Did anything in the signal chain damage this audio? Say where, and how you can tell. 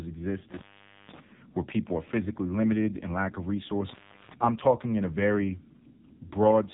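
Yes. Throughout the speech the voice sounds buzzy and synthetic, with a boxy, phone-like narrowness and nothing above about 3.8 kHz. That points to the codec stage, specifically the AMR narrowband mobile codec (AMR-NB). It samples at 8 kHz and rebuilds the voice from a vocal-tract model excited by a few pulses per subframe. The heavy roughness suggests one of its lowest modes, consistent with about 6 kbps, where too few bits leave the excitation coarse.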